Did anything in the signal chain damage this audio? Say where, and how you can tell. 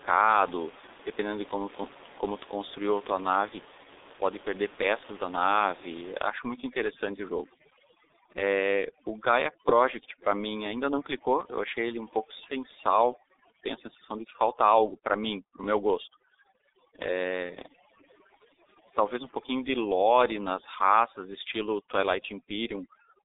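Yes. The damage comes from the codec stage: G.723.1 coding runs through the whole speech clip. Nothing reaches above about 3.8 kHz, and the line band sits at roughly 250 Hz to 3.7 kHz. Beyond the muffling, the voice turns hoarse and consonants smear. A simple telephone filter would not do that. The coder updates its voice model only every 30 ms, which fits a bitrate near 6 kbit/s. The room noise, about 18 dB below the speech, comes through the same band.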